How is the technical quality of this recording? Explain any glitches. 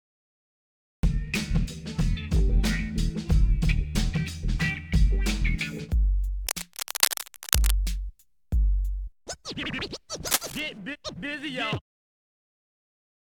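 The recording has two technical faults: a cut-off start and two bursts of cable scratch noise.

Cut-off start: digital silence runs until 1.03 s, then the sound enters abruptly mid-event with no attack, because capture began late.

Cable scratch noise: from 6.47 to 7.75 s and from 10.27 to 10.60 s, dense, uneven scratching sits only a few dB below the signal, likely from a worn cable or connector being disturbed.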